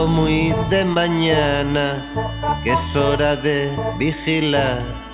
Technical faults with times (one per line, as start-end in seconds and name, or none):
0.94-0.97 short concealed packet loss